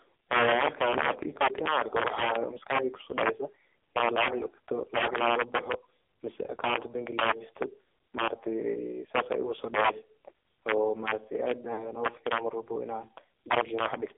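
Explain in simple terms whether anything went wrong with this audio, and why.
Integer overflow affects the whole clip. The loudest peaks of the speech are pushed past the largest number the system can store. Instead of stopping at the limit, they wrap to the opposite extreme. A small share of peaks do this, causing harsh, sudden cracks far sharper than ordinary clipping.

The speech also went through the AMR narrowband mobile codec, the old phone-network speech format, squeezed very hard. Only sound between about 300 Hz and 3.5 kHz survives. The voice sounds thin, buzzy and artificial, like a poor mobile call.

There are also lost AMR speech frames in two places. Small pieces of the call signal were damaged, and the decoder filled them by stretching the last good sound while fading it. There is one short gap from 4.98 to 5.03 s. A longer one, two pieces long, runs from 11.74 to 11.87 s and makes a brief smeared dropout.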